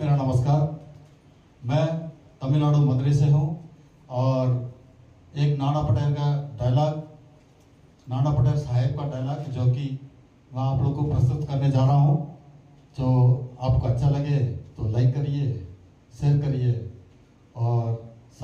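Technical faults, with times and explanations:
No technical faults can be heard anywhere in this audio.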